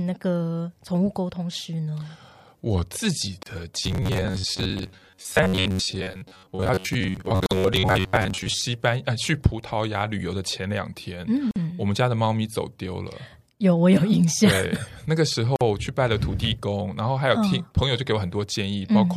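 A gap at a join of encoded pieces opens at 3.43 s, a 32 ms gap where separately encoded segments were butted together, leaving encoder delay and padding in.

Robotic sound from repeated short buffers runs from 3.83 to 8.62 s: a rigid 94 Hz buzz, likely from roughly half the audio being replaced by repeats of about 11 ms buffers.

Further 49 ms join gaps follow at 7.46, 11.51 and 15.56 s, recurring every 4 s, each a dropout before the sound resumes.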